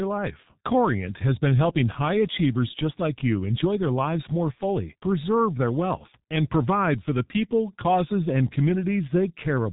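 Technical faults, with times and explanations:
Throughout, G.723.1 codec: the speech has that muffled, hoarse quality of early internet telephony, with nothing getting through above 3.8 kHz, so the sibilants and crisp consonant edges are gone. The damage is heavy, with the codec running at about 6.3 kbit/s. The codec chops the signal into 30 ms frames and refreshes its model of the voice only that often, so fast transitions smear together and consonants come out blurred.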